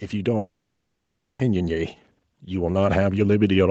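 From about 0.12 s right through to the end, you can hear automatic gain rising. The gain control decided the input was too quiet and kept turning it up, so the speech and the background noise swell together gradually rather than jumping in level.

Then at 0.37 s the sound cuts out until 1.41 s, just over a second, most likely a long network dropout. The receiver briefly stretches the last bit into a fading buzz, then about 0.9 s of near silence, and the speech resumes with that stretch simply gone.

Throughout, nothing reaches above 8 kHz, which fits an Opus call codec running wideband.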